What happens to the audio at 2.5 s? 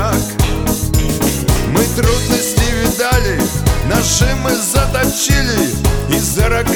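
Nothing goes wrong at 2.5 s; the audio plays through that moment intact, with no dropout, click or other audible fault.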